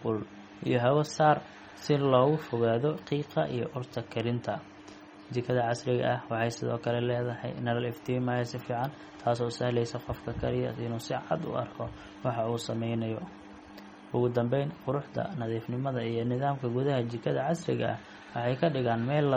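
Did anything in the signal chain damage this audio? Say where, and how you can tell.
Yes. Throughout the speech the sound is watery and swirly, with metallic chirps on s sounds and smeared consonant attacks, and nothing above 18.2 kHz. That points to the codec stage, likely MP3 compression at a low bitrate around 32 kbps, zeroing weak frequency lines that flicker between frames.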